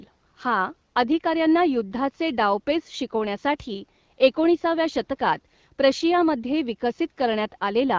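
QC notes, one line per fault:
No faults found in this clip.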